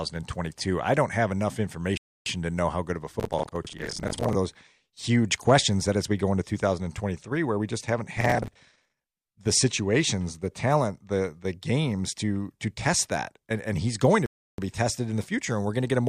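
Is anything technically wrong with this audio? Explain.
Yes. Twice the player's download fell behind and it stopped to wait: rebuffering stalls at 1.97–2.26 s and 14.26–14.58 s drop the speech into silence, then resume exactly where it stopped, adding about 0.29 s and 0.32 s.

Processor overload crackle runs from 3.20 to 4.35 s and from 8.18 to 9.35 s. The processor kept missing its deadlines, replaying old audio in hard-edged slivers that sound like roughly 10 ms buffers. The result is a gritty tearing over the speech that ends when the load eases.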